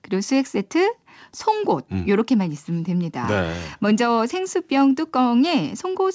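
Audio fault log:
No fault is logged for this speech audio.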